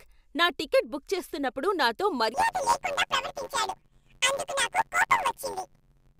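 Planar audio read as interleaved begins at 2.34 s, just after "టికెట్ బుక్ చేస్తున్నప్పుడు నాతో", and runs to the end. Each 10.88 ms block of left-then-right samples is taken as alternating pairs, so the speech turns into a robotic buzz at about 92 Hz, with no clear octave shift.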